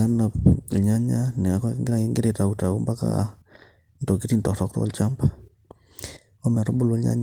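No technical faults can be heard anywhere in this speech recording. The Opus voice compression leaves only light coding traces, and the band stays full, reaching to about 20.2 kHz, which points to hybrid coding at a moderate rate of around 20 kbps.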